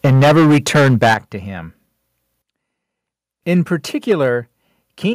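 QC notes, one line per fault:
0.04–1.17 s, 3.50–3.58 s, 4.10–4.12 s, microphone overload: peaks slam into the converter's ceiling and get their tops sheared off. The opening stretch runs about 13 dB over with a big share of samples flattened, the later two about 1 dB and 4 dB. That squaring gives the gritty crackle, likely from input volume set too hot.
0.06 s, 1.14 s, 4.12 s, 5.13 s, microphone volume stepped down: the whole level drops in one abrupt step, by about 2, 9, 4 and 6 dB, speech and background together. The 1.14 s and 4.12 s drops land right as clipped peaks end, likely the call software pulling device input gain down.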